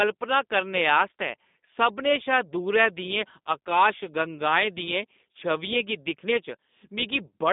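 From start to finish the speech carries G.729 codec damage, plainly audible. The band stops near 3.8 kHz, leaving a thin telephone line roughly 200 Hz to 3.7 kHz, and rebuilding each frame from a vocal tract filter, pitch predictor and a few pulses makes the speech rough and synthetic, consistent with 8 kbit/s coding.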